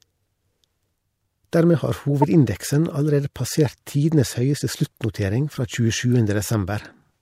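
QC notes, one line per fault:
2.22–2.24 s, corrupt frame decoded: a sharp chirp-like burst, loud (peaking near -10 dBFS), lasting a few codec frames. Damaged bits made the decoder rebuild energy at the wrong frequencies. A spectrogram shows a short vertical smear off the speech harmonics; the waveform shows a spike.
5.55–5.57 s, corrupt frame decoded: just after "passert tidenes høyeste sluttnotering", a quieter blip spanning a couple of frames, with a brief misplaced band and a small waveform glitch.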